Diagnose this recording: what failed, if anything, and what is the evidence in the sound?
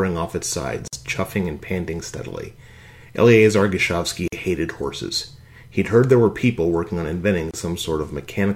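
The codec stage failed where separately encoded pieces were joined. There are three gaps at joins of encoded pieces. The sound drops to silence at 0.88 to 0.93 s (51 ms), at 4.28 to 4.32 s (46 ms), and at 7.51 to 7.54 s (28 ms). Each gap has smeared edges. The sound resumes exactly where it stopped. Each piece kept its encoder start delay and the padding on its last frame, so silence sits at every seam.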